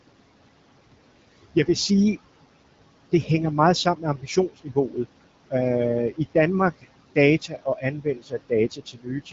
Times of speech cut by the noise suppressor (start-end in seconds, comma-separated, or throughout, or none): 3.84-5.06, 7.41-9.33